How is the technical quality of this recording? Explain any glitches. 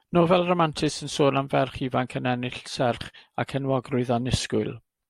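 The recording has no technical faults that can be heard. There are no glitches in the speech to explain.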